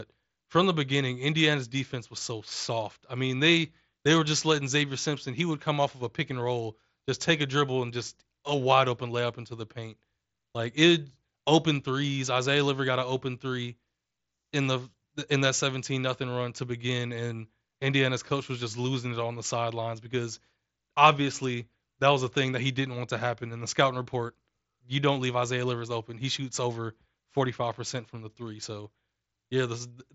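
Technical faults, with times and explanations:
Nothing here counts as a fault: the speech simply comes over a Bluetooth mSBC headset link, which is why there's nothing above 7.7 kHz.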